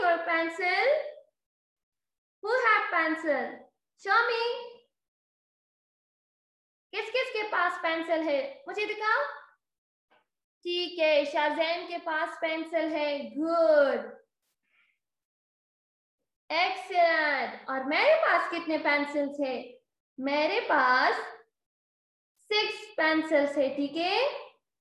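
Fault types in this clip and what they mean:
Nothing stood out on listening to this clip.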